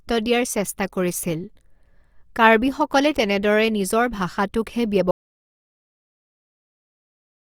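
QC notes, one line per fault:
5.11 s to the end: audio dropout to silence. The speech stops abruptly mid-flow at 5.11 s and never returns. What follows is silence, with no room tone or background hiss underneath. That total absence is the giveaway: a quiet room still leaves a noise floor, but here the recorder kept writing silence. The likely cause is a lost input, such as a disconnected device, a failed link or an accidental mute. Everything spoken after that point is gone.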